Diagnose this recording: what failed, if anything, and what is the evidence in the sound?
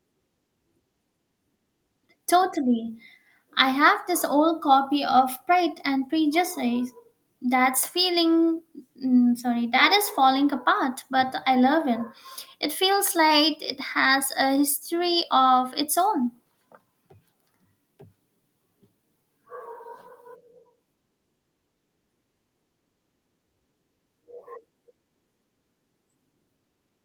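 Nothing failed; no fault is audible anywhere.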